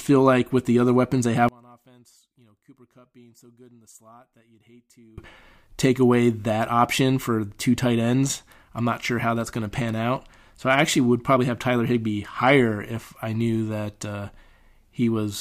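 From 1.49 s to 5.18 s, one stereo channel was likely flipped in polarity, the fault known as one channel inverted. When the two channels are summed, everything they share cancels, and since the speech sits in the centre, it collapses by about 30 dB. Through that stretch the voice all but disappears, leaving only a faint residue of whatever differs between left and right, before full level returns at 5.18 s.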